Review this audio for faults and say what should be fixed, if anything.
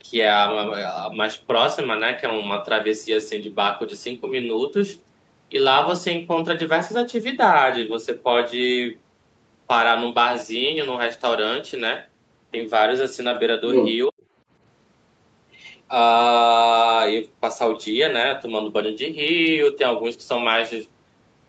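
From 13.71 to 13.94 s, the other side's voice leaks through at about the talker's level. It is likely echo the canceller missed, and it is a different voice, not the talker's own repeated.

From 14.08 to 14.22 s, speech is suppressed in double talk. The talker drops by about 40 dB for roughly 150 ms while both sides overlap. This is likely a gain cut during overlap, not a concealed packet gap.

Retune the echo canceller's double-talk detection and residual suppression, or have the talker use a headset so the loudspeaker no longer feeds the microphone.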